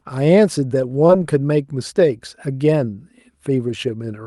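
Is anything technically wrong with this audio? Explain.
Yes. Around 1.07 to 1.11 s there is short concealed packet loss: about 20 ms of the call's audio arrived too late for the decoder, and the receiver covered the gap by extending the preceding speech for roughly 12 ms before blending back into the real signal. What you hear is a brief smear or wobble in the speech, where a short consonant may be lost. The call codec also limits the audio to about 12 kHz.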